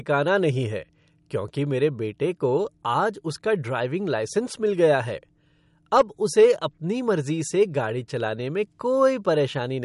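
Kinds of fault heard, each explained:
MP3 compression: The treble stops at 11.2 kHz, and the speech has plainly audible watery, swirling artefacts. The likely cause is an MP3 encoder short of bits, which fits a low bitrate near 48 kbps. It switches weak frequency lines on and off between frames.
Hard clipping: The peaks were pushed past what a stage could pass, so they were cut flat. This adds harmonics high up and is heard as crackle, from 5.95 to 6.01 s at about 4 dB over, and from 6.39 to 6.45 s at about 2 dB over.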